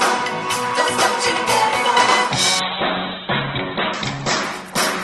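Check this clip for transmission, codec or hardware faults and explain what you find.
There is one fault, a call bitrate drop that begins at 2.6 s and lasts to the end of the clip. The encoder's rate falls from 48 kbps to about 8 kbps and stays at its lowest for about 1.1 s. With so few bits the Opus coder quantises coarsely and narrows its bandwidth from 20 kHz to 4 kHz, so the sound turns muffled, rough and watery. A spectrogram shows energy above 4 kHz vanishing after 2.6 s, leaving a flat ceiling with smeared, blotchy detail beneath it.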